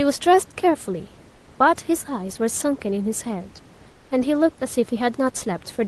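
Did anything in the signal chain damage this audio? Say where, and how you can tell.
Yes. Comfort noise replaces the background at 1.35–1.47 s and 3.89–4.11 s, where the room tone turns featureless and about 4 dB quieter, likely from codec discontinuous transmission.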